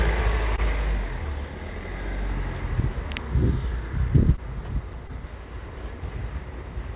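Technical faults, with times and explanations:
0.56 s, 4.36 s and 5.07 s, short concealed packet loss: each time about 20 ms of the call arrived too late to decode, and the receiver covered the gap by extending the preceding sound for roughly 13 to 18 ms before blending back into real audio. This is heard as a brief smear or wobble rather than a cut. Unlike a chunk gap, nothing jumps ahead, because the hole is patched with synthesised continuation of the narrowband, G.711-style audio, which has nothing above 4 kHz.
4.93 s, audio missing between chunks: here the sound jumps abruptly, as if around 50 ms were removed and the two sides butted together with no silence, giving a discontinuity at the join. The likely cause is a recorder or processor working in 3-second blocks that drops a sliver while handing over from one block to the next. Unlike the concealed losses, no filler is generated, so the material simply skips rather than smearing.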